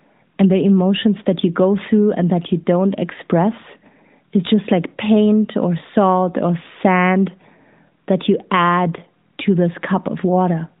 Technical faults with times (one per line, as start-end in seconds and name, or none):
none